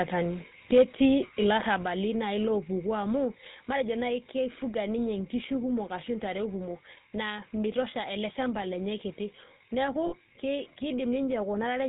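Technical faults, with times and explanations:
Throughout: GSM full-rate codec. The speech has a buzzy, gravelly roughness, with nothing above 4 kHz and a thin, boxed-in quality. The damage is plainly audible. This fits the 13 kbps full-rate coder, which represents the vocal tract as a filter and excites it with a sparse train of evenly spaced pulses. Because only every third excitation sample survives, the fine detail of the voice's source is replaced by that coarse, grainy buzz.
10.06 to 10.15 s: lost GSM frames. For a moment the sound freezes into a rough, metallic ring instead of moving on. Roughly 60 ms of signal went missing, which fits three dropped 20 ms frames. The decoder covered the gap by reusing the parameters of the last good frame. That repeated, static spectrum produces the ringing smear. The loss is short, so it never fades fully to silence.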